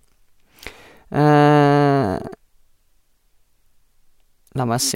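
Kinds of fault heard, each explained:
No faults can be heard anywhere in this recording.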